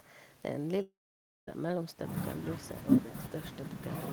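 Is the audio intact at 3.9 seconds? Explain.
Yes, the speech at 3.9 seconds plays through intact, with no dropout, click or other fault at that moment.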